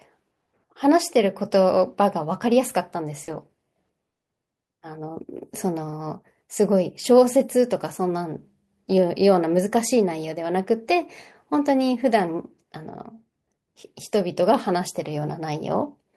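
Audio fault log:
0.45 to 0.49 s, short concealed packet loss: about 20 ms of the call arrived too late for the decoder, so the receiver carried the last bit of sound forward across the hole and blended back in, which leaves a quick smear right near the start.
3.23 to 3.29 s, short concealed packet loss: a longer patch, about 40 ms, filled the same way by stretching the preceding sound, so you get a brief wobble where the real audio dropped out.
3.27 to 3.33 s, lost packet rebuilt from error correction: overlapping that patch, two lost packets were played back from the low-bitrate copies carried in the following packets, covering about 40 ms without a gap, but those frames come out rougher and noisier.
4.09 to 4.25 s, repeated packet loss (robotic sound): four separate gaps, none longer than 20 ms, hit in quick succession, so half of this short stretch is patched-in sound. Each hole is followed soon after by the next, giving a choppy stutter with pieces missing.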